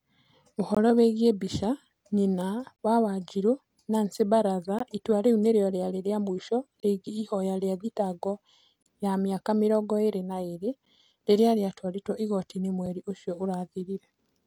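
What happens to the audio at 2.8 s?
A hard-edged hole of silence, about 26 ms, breaks the speech from 2.76 to 2.79 s: a gap between stream segments, where mismatched timestamps leave space the player fills with silence.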